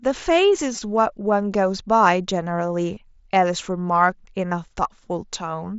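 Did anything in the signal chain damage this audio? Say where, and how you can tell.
Yes. Concealed Bluetooth headset packet loss on the wireless link at 0.75 to 0.82 s, 2.95 s and 4.49 to 4.51 s: short gaps filled by repeating the last matching waveform, buzzy through the longest run of about 22 ms, over light mSBC graininess.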